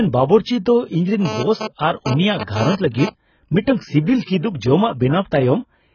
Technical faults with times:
0.00-5.95 AAC compression
1.25-3.09 GSM phone buzz

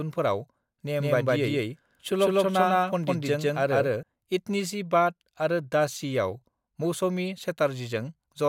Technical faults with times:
0.99-4.03 doubled audio track

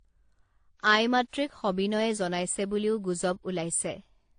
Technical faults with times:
0.00-4.39 transcoding between lossy codecs

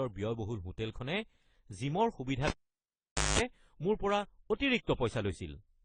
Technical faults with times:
0.00-5.84 transcoding between lossy codecs
2.47-3.39 cable pulled and plugged in

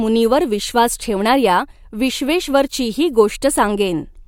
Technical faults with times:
none

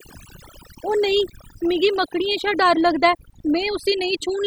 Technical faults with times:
0.00-4.46 overdone noise removal

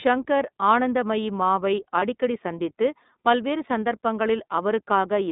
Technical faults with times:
0.00-5.32 iLBC codec
2.00-2.03 lost iLBC frames

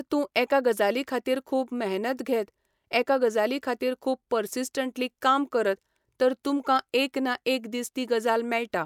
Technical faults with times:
none

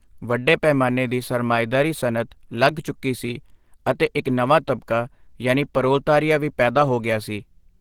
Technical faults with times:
0.00-7.81 Opus compression

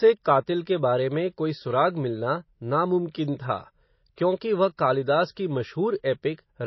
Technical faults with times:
0.00-6.66 MP3 compression

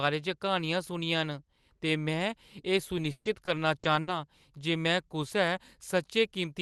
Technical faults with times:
2.97-4.09 repeated packet loss (robotic sound)

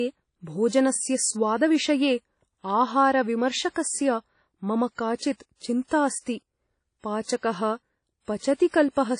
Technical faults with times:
0.00-9.20 WMA compression
8.55-8.74 pre-echo

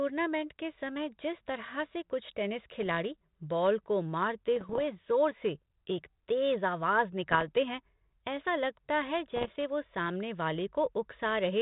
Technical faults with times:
2.82-2.86 bit errors on an ADPCM link
4.56-4.87 bit errors on an ADPCM link
7.32-7.48 bit errors on an ADPCM link
9.36-9.57 bit errors on an ADPCM link

